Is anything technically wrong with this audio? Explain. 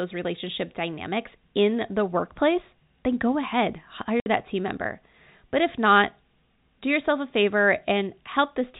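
Yes. From 4.2 to 4.26 s, between "workplace then go ahead" and "that team member", the speech drops into a hard 60 ms hole of dead silence. This is packet loss filled with silence: the lost stretch, which fits three 20 ms packets, was replaced with nothing. The narrow telephone band from G.711 coding is audible around it.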